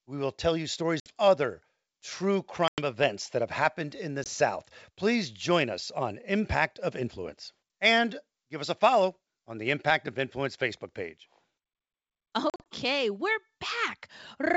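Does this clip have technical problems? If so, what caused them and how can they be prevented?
Yes: packet loss on an ADPCM call leaves hard-edged silent gaps at 1.00–1.12 s (60 ms), 2.68–2.80 s (100 ms), 4.24–4.28 s (20 ms) and 12.50–12.66 s (100 ms scattered in short runs). Afterwards the decoder's predictor and step size no longer match the sender's, so speech resumes slightly distorted until it resynchronises. Prevention: add jitter buffering with packet-loss concealment and forward error correction, and reduce network congestion.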